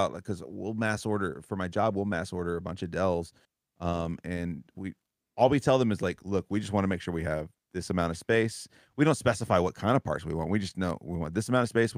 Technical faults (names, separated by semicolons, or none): none